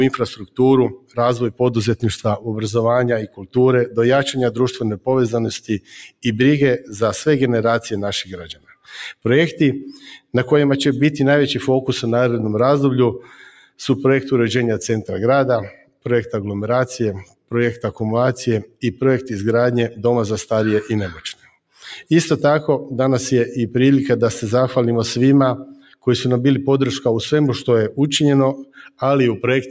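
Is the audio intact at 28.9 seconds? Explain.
No. Between 28.65 and 29.01 s the sound sinks sharply, by about 18 dB at its deepest, as the noise suppressor cuts this sound after mistaking it for noise. Throughout the clip, a speech noise suppressor applied to music or sounds makes the level pump and thin, swinging by about 10 dB as sustained parts are pulled down.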